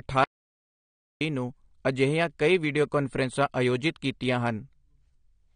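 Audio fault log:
throughout AAC compression: the speech sounds dull and smeared, with a watery, fizzy edge on sibilants and held sounds, and nothing at all above about 9.7 kHz. This is likely lossy AAC-LC coding at a low bitrate, which the sharp top-end cut-off points to at around 32 kbps. To save bits, the encoder quantises its frequency lines coarsely and discards the highest band entirely, leaving plainly audible damage.
0.24–1.21 s audio dropout to silence: just after the start the sound stops dead for about 0.97 s, falling into silence with no room tone beneath it, then resumes abruptly on "ਨੂੰ ਅਜਿਹੀਆਂ ਕਈ ਵੀਡੀਓ". The likely cause is a momentary loss of the input signal, such as a broken link or a brief mute, while recording carried on writing silence, so whatever was said in that gap is gone.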